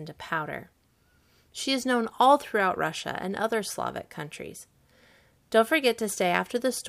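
Nothing technically wrong turns up anywhere in this speech recording, so there are no fault times or causes to report.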